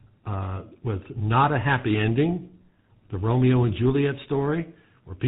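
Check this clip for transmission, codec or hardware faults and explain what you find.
The clip has one fault, present for its whole length: tandem speech coding. The sound points to two speech coders in series, likely a CVSD-type link passed through a G.711 leg into GSM full rate. Each stage decodes to a waveform and the next re-encodes that already-degraded signal, so the errors compound. The result is rough, muffled, warbly speech with no content above 3.8 kHz, coarser than either coder alone would produce.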